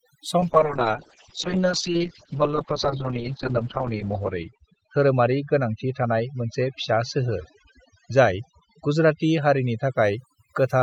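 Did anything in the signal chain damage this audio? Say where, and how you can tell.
Yes. Throughout the clip the background sits at near silence with twinkling specks. That is overdone noise removal in call processing: the suppressor pulls individual frequency bands down whenever they approach its noise estimate, taking quieter speech detail with them.

From 0.41 s to 10.01 s the speech turns rough and muffled, bottoming out for about 2.7 s. This is a call bitrate drop at the codec: the rate fell from 48 to 7 kbps, and Opus coarsened its coding and narrowed the bandwidth from 20 kHz to 8 kHz.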